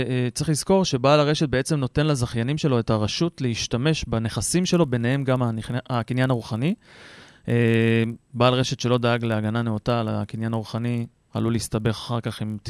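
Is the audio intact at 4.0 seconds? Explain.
Yes, the speech at 4.0 seconds plays through cleanly, with no dropout, click, distortion or other disturbance at that point.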